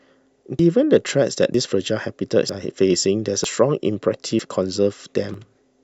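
Every 0.95 seconds or so, at 0.59, 1.54, 2.49, 3.44, 4.39 and 5.34 s, the speech jumps forward. Each time a sliver of about 50 ms is gone, and the two sides butt straight together with no gap, so it sounds like a tiny hiccup at a steady pulse. That regular spacing points to audio missing between chunks, likely a recorder or processor handling roughly one-second blocks and dropping a bit at each handover.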